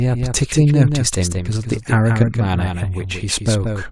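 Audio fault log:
Throughout: doubled audio track, a second full-band copy of the speech trailing about a fifth of a second behind at a few dB down, clean and dry, likely from a second capture path.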